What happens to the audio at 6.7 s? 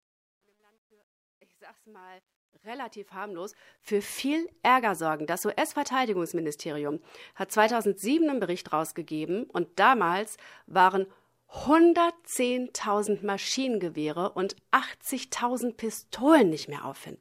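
Nothing goes wrong at 6.7 s: the speech there is intact, with no dropout, click or other fault.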